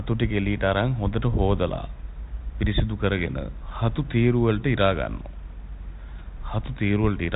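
Speech with no technical faults to report, carried over a G.726 telephone path whose band stops at 3.8 kHz as that codec requires.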